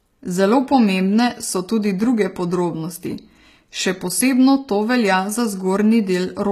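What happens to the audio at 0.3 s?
HE-AAC compression is audible at 0.3 s and runs through the whole clip. The likely cause is a codec that encodes only the lower spectrum at a low rate, in keeping with roughly 20 kbps, then rebuilds the treble by copying lower bands upward under a coarse envelope. The damage is plain: the top end sounds synthetic, sibilants turn gritty and metallic, and nothing remains above 14.9 kHz.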